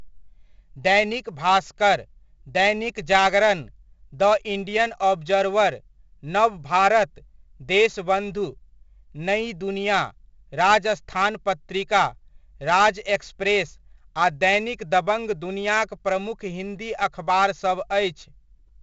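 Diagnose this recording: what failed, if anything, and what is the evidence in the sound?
The codec stage failed: the whole recording carries 4-bit ADPCM compression damage, and it is heavy. A gritty hiss rides on every loud syllable, rising and falling with the speech level, and sharp onsets come out distorted. The coder sends only a 4-bit step from its predicted sample, so its error tracks the signal and its adaptive step lags behind fast attacks. Nothing is present above 7.8 kHz, which fits a 16 kHz sample rate and a 64 kbps stream.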